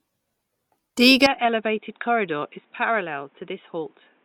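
At 1.26 s the speech abruptly loses its upper range and stays that way to the end: nothing is present above 3.8 kHz, the level falls by roughly 10 dB, and a new background noise appears, around 40 dB below the speech. There is no gap at the transition. The change is most likely an input switched to a poorer device, which fits a narrower-band microphone or a headset call profile taking over mid-recording.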